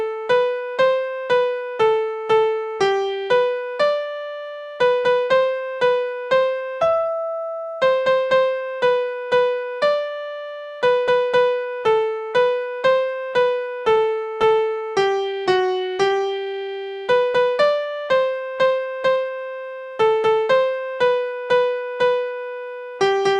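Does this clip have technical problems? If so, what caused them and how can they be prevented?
Yes. From 13.69 to 14.80 s there are repeated stalls (stutter): packets arrived late, the jitter buffer ran dry twelve times, and each gap, none longer than 14 ms, was bridged by continuing the last sound. About 116 ms was filled this way. Unlike packet loss, nothing is skipped; the audio just catches and drags. Steadier network delivery or a slightly deeper buffer prevents it.

From 15.32 to 16.75 s a jitter buffer slow-down stretches the sound to 91% speed. Repeated pitch periods add 134 ms to rebuild the buffer's reserve. Because the pitch stays the same, it sounds drawn out rather than lowered, which tells it apart from a playback-rate error. A stable target delay prevents it.

From 18.66 to 19.46 s a jitter buffer speed-up runs the sound at 113%. It trims about a tenth of a second of pitch periods to shed excess delay after late packets arrived together. 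The pitch is unchanged, so it sounds hurried rather than chipmunk-like. Smoother packet pacing prevents the bunching.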